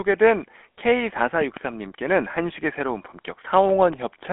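Across the whole speech clip, voices have a buzzy, gravelly roughness over a narrow band running from about 200 Hz to 3.5 kHz. This is the GSM full-rate codec, which fits a 13 kbps link: it models the vocal tract and drives it with sparse regular pulses, plainly coarsening the sound.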